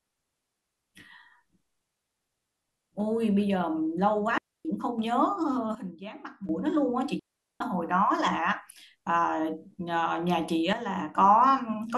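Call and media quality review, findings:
Digital wireless dropout, 4.38 to 4.65 s: clean hole of near silence, about 270 ms, no noise burst either side. Receiver muting after losing too much data on the RF link, then coming back with a quick fade. Same again 7.19 to 7.60 s, roughly 410 ms this time. Longer gap, same clean mute, so the link is dropping out repeatedly.

Sudden gain jump, 5.75 to 6.49 s: speech and noise floor drop together by about 12 dB in one step, no ramp. Likely a gain setting or bit shift applied instantly somewhere in the digital chain. Another at 10.73 to 11.15 s, about 6 dB down, same hard step in level with the background following along.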